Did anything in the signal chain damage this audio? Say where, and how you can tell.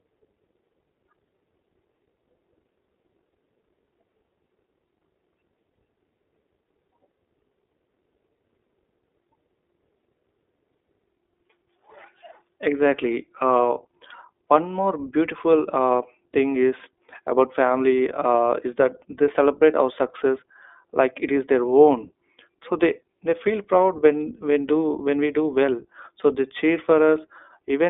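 Yes. The damage is at the codec stage and runs through the whole speech clip. Energy stops near 3.8 kHz and the band sits roughly between 300 Hz and 3.6 kHz, which points to a narrowband iLBC codec. The speech has a plainly audible rough, synthetic edge, and each 20 ms frame's excitation is coded on its own without leaning on the previous one. That behaviour fits the 15.2 kbps iLBC mode.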